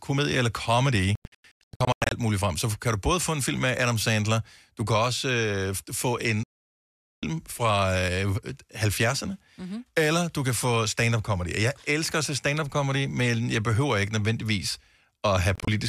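Digital broadcast dropouts interrupt the speech three times. From 1.15 to 2.12 s, the receiver mutes in a scatter of short holes, each no longer than 96 ms, losing about 650 ms before the speech resumes at "muligt frem". Right after "også øh få en", from 6.43 to 7.23 s, the sound goes silent for about 0.8 s. Near 15.55 to 15.68 s, tiny gaps remove about 70 ms. Each time, frames were lost, and that audio is gone.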